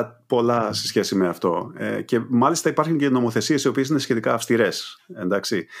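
No technical faults can be heard in this recording.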